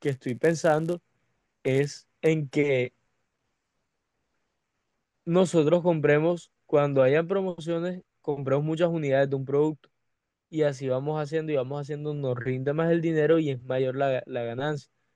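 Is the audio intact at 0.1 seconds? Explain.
No. At 0.1 seconds the speech is under a filter restarted on every block, a fault running from 0.00 to 2.29 s. The filter discards its memory at each block boundary and starts again from silence, so every block opens with a small transient. These repeat 100 times a second, which fits 10 ms blocks, and merge into a 100 Hz buzz whose loudness rises and falls with the level of the speech.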